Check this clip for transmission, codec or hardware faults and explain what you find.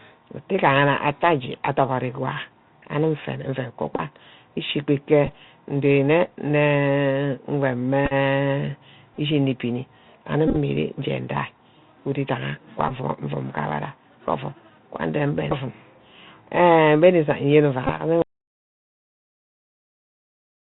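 Three faults are present: the whole clip has passed through a Bluetooth CVSD headset codec, seven short bursts of Bluetooth headset packet repetition appear, and a dropout to silence closes the clip.

The Bluetooth CVSD headset codec affects the speech from start to finish, and the damage is plainly audible. CVSD sends a single up-or-down bit per sample at 64 kbps, and the step size adapts to follow the signal. Nothing above about 4 kHz survives. Where the speech rises quickly in level or pitch, the step cannot keep up and the sound distorts. Sibilants turn scratchy, and a granular hiss sits under everything. A plain low-pass filter would only sound muffled. The grainy slope-overload roughness is what marks this as a delta-modulation codec.

Bluetooth headset packet repetition occurs at 3.96–4.01 s, 5.26 s, 8.06–8.13 s, 9.15–9.19 s, 10.48–10.57 s, 12.89–12.91 s and 17.87–17.92 s. When voice packets were lost, the chip decoded the previous packet's bits again. 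Each packet spans 3.75 ms, so a run of repeats produces a brief buzz near 267 Hz. The longest runs come in the scattered clusters around 8.1 s and 10.5 s, at about 20 ms each. The cluster near 9.2 s peaks at about 15 ms. The other events last between 11 and 22.5 ms. A click or crackle has no pitch, whereas this buzz does.

The dropout to silence begins at 18.22 s and lasts to the end of the clip. The speech cuts off in mid-flow and is replaced by silence, with no room tone left underneath. A fade or a gate would leave some residual noise. The cause is likely a lost input or a failed link, with the recorder continuing to write silence afterwards.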